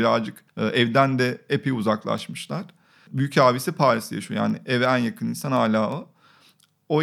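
A digital link feeding this speech is being read by a device on its own clock, not locked to the sender's, with the two clocks drifting apart by around 150 ppm. Each time they slip past one another, a sample is dropped or repeated. From 0.22 s to 6.99 s this gives word clock ticks, some forty sharp clicks of uneven strength recurring about every fifth of a second, running right through the speech.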